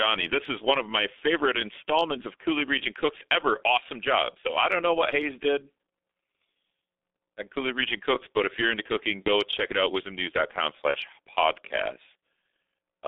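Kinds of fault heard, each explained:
G.723.1 codec: A low-rate telephony speech codec working in 30 ms frames. The whole clip is confined to roughly 250 Hz to 3.7 kHz and is heavily damaged, sounding muffled and hoarse with smeared consonants, which fits a setting around 6 kbit/s.
VoIP packet loss concealed by the speech codec: Missing audio filled in by the decoder repeating its last pitch and filter at falling gain. A brief smear occurs at 9.24 to 9.29 s, between "if you're into cooking" and "check it out", and again at 10.91 to 10.96 s, each consistent with a single lost 30 ms frame.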